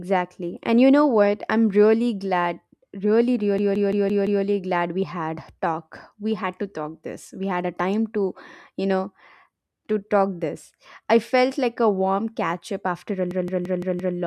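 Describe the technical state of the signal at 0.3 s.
At 0.3 s the speech signal is intact, with no audible technical fault at that moment.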